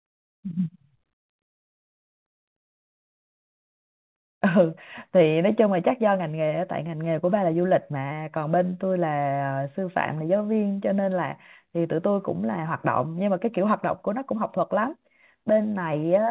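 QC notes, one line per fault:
6.56–8.34 s, scattered short gaps: about ten brief ticks and tiny smears pepper this stretch, each a hiccup of roughly 15 ms or less, while the sound stays clear between them. Individual packets went missing or arrived too late, and the receiver covered each small hole by extending the last stretch of waveform. Around a tenth of a second in total was patched this way, roughly 7 percent of the span.
8.48–10.69 s, jitter buffer slow-down: the speech drags, running at about 93 percent speed with unchanged pitch, so sounds and pauses feel stretched. The jitter buffer had run short of reserve, so the receiver repeated single pitch periods and slivers of pauses over and over to build it back up. This added 167 ms across the stretch.
12.68–15.35 s, jitter buffer speed-up: the speech turns slightly hurried, running at about 105 percent speed with the pitch held steady. 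The jitter buffer was holding more audio than its target, so the receiver trimmed away short pieces, one or a few pitch periods at a time, many times in succession to shed the extra delay. Roughly 150 ms was removed over the stretch.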